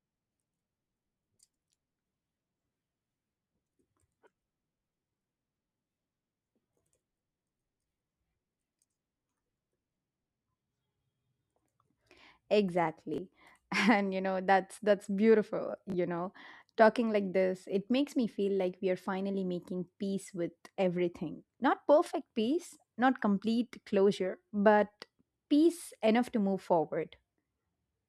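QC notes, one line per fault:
13.14–13.18 s and 15.90–15.94 s, chunks out of order: in each spot one 20 ms chunk of speech plays one chunk late, after the slice that should follow it, so two adjacent 20 ms pieces are swapped across 40 ms. Nothing is missing, but the reversed order creates three abrupt waveform joins, heard as a brief jumbled flicker. The second instance falls right after "know that's that's beautiful".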